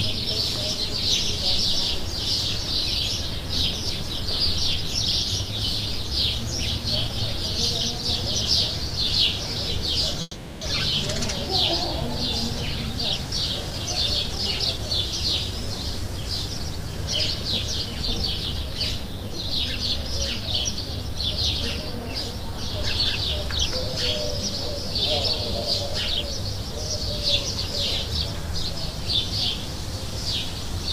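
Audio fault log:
10.21–10.63 s, call audio freeze: the sound stalls into a fading buzz for 400 ms, ending in 20 ms of silence, likely from held-up packets emptying the jitter buffer. On a spectrogram, smeared repeating bands fade out.
10.91–10.94 s, skip ahead: roughly a tenth of a second of sound is dropped and the two sides are joined almost directly, showing as an abrupt splice in the waveform.
13.7–19.96 s, jitter buffer speed-up: short pitch-period pieces, about 0.3 s in total, are cut out, so the audio runs 4% faster at unchanged pitch. The spectrogram looks slightly compressed in time.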